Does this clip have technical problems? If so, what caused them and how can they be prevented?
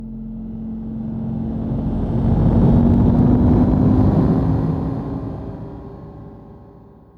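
Yes. Gain pumping runs through the whole clip: the gain swings by around 5 dB as loud sounds come and go, so the level seems to breathe in and out. Loud and soft moments sit unnaturally close together, giving a squashed feel. The likely cause is input gain set far too high, with a fast limiter or compressor clamping down on every peak and releasing in the gaps. Setting a lower input gain, so the limiter rarely has to act, would prevent it.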